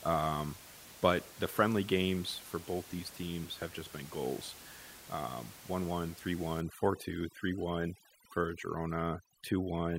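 From 6.61 s to the end, overdone noise removal sets in: bands near the noise estimate are cut away, leaving twinkling near-silence between phrases.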